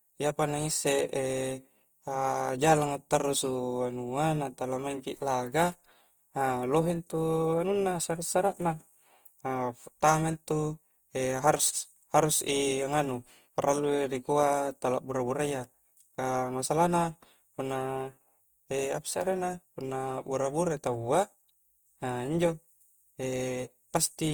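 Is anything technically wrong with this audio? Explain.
Yes. Throughout the speech, tones sound grainy, rough and noisy. This is likely Opus compression in music mode, near 24 kbps. Bit-starved bands get filled with noise or folded copies.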